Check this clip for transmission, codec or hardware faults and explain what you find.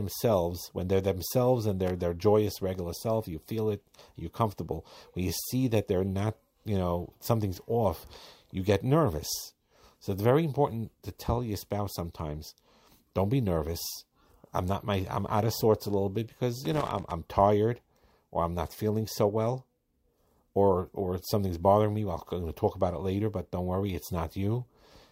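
Two bursts of loose connector crackle appear, at 1.87 to 1.91 s and at 16.65 to 17.11 s. A worn or dirty contact is making and breaking, chopping the speech, heard as irregular scratching. The waveform shows jagged dropouts and spikes, and the spectrogram shows scattered broadband vertical streaks.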